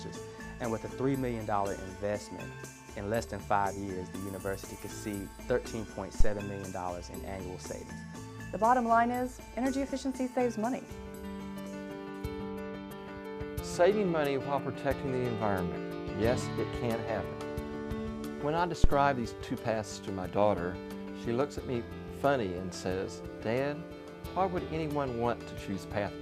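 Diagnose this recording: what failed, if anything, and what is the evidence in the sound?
The fault is in the analogue front end: two phantom power thumps. The first runs from 6.20 to 6.35 s and peaks around -10 dBFS. The second runs from 18.84 to 18.97 s and peaks around -8 dBFS. Each is a deep low-frequency bump that dies away fast, with decays of about 34 ms and 29 ms. That's the signature of a supply being switched on a live input, with the DC step punching through the coupling capacitors into the signal path.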